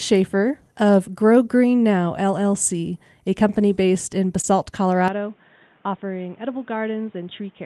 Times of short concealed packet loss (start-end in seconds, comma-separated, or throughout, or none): 4.41-4.45